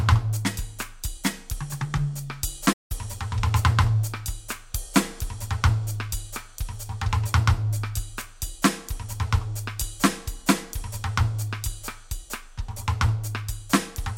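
At 2.72 s the music cuts out in mid-flow for about 173 ms, resuming at 2.92 s. This playback stall likely comes from the player running short of data or its thread being blocked. The waveform shows a flat gap, and the spectrogram a blank vertical band.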